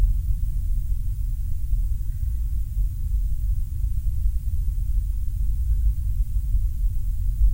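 No audible technical faults turn up anywhere in the signal, and nothing in its level, timing or continuity stands out as a defect.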